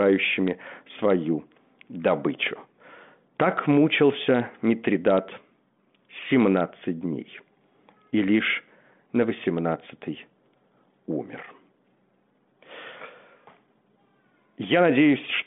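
Nothing here counts as a fault; the speech comes through a G.726 ADPCM link running at 40 kbit/s, so it has that telephone-band feel of roughly 150 Hz to 3.5 kHz with nothing above about 3.8 kHz, and any coding grit it adds is faint at most.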